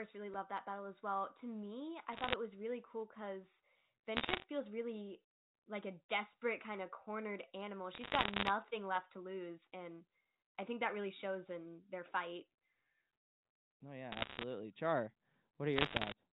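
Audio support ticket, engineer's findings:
Bit errors on a digital phone line, speech clip. Bursts of sharp ticks and crackle over intact speech at 2.13–2.33 s (after "me I"), 4.16–4.44 s (after "was really cool because"), 7.92–8.50 s (after "kind of cornered animal"), 14.12–14.43 s and 15.76–16.12 s. Flipped bits in the 8-bit mu-law G.711 samples, roughly one bit in a hundred. Sign or high-bit hits give the loudest clicks. Band-limited telephone sound comes through as expected.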